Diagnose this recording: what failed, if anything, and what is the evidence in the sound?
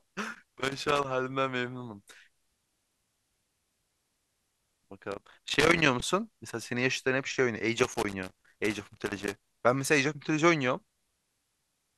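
Loose connector crackle, heard as irregular bursts of crackle and scratching over the speech from 0.33 to 1.05 s, 5.11 to 5.86 s, 7.79 to 9.41 s, and 10.90 s to the end of the clip. The stage is the analogue wiring: a worn or dirty contact keeps making and breaking as it shifts, chopping the signal in rapid, uneven bursts, with any DC on the line adding pops each time the connection snaps back.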